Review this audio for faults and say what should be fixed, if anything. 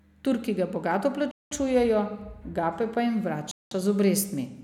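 The speech breaks twice with a gap between chunks: 1.31 to 1.51 s and 3.51 to 3.71 s. Each hole is 200 ms of silence. The two gaps are 2.2 s apart, matching 2.0 s chunks plus the inserted silence. The audio was delivered in 2-second pieces, and silence was left at each join. No speech is lost. It is delayed and cut apart. To prevent it, join chunks back to back without padding or late playback starts.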